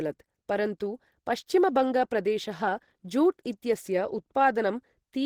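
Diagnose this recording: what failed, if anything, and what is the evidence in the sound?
The codec stage failed. Throughout the speech, the sound is hoarse and grainy, yet content still reaches 20.2 kHz. This is likely Opus compression in hybrid mode, fitting a rate near 16 kbps. A speech coder carries the low band. Upper bands keep only their energy and are filled with noise.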